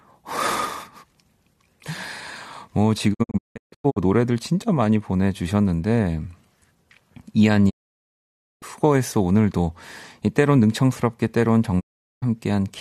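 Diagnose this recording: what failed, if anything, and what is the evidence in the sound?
Digital broadcast dropout at 3.13 to 3.98 s, 7.69 to 8.64 s and 11.79 to 12.24 s, a failure at the reception and decoding stage. The speech fades out over about 20 ms and falls silent. The first event breaks into several short holes, the longest 168 ms, totalling about 0.58 s. The others are near-solid gaps of about 0.91 s and 0.41 s. Corrupt frames were muted, and the gap sizes fit 24 ms frames.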